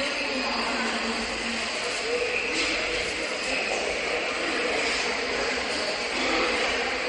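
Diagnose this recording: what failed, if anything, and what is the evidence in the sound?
The failure is at the codec stage, most likely MP3 compression. The damage is plainly audible across the whole clip. Nothing is left above 10.5 kHz, so the top end sounds dull and flat. The remaining detail has a watery, swirling quality. Attacks smear. This fits a starved bitrate, near 44 kbps. The encoder ran short of bits. It cut the treble at a fixed frequency and zeroed weak frequency lines, which flicker on and off between frames.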